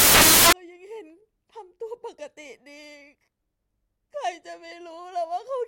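The reader assembles samples from the wrong bytes over the opening stretch, from 0.0 to 0.53 s of this speech recording, either misaligned by a byte or with the byte order swapped. Each value's fast-changing low bits end up in the high, loud part of the sample, so the true waveform is buried under loud, harsh broadband noise, close to white where the speech is loud, before correct decoding resumes.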